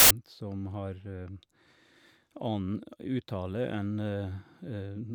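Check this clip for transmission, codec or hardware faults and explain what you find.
One fault is present. From 0.0 to 0.11 s, file tags are played as audio: an embedded cover picture, compressed data read as samples, gives a hard-edged burst of very loud white noise. It is a block of flat static rather than a single click.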